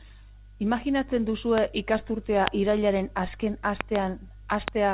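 Loud pops break into the speech at 1.58 s, 2.48 s, a double pop from 3.81 to 3.98 s, and 4.68 s. Each is a sharp, brief thump. It peaks at roughly 20 to 25 dB above the speech. The speech carries on underneath each one. A sudden voltage step or pulse entered the signal path. The likely cause is a plug, switch, static discharge or driver glitch. The speech sits inside the narrow call band, which stops at 4 kHz.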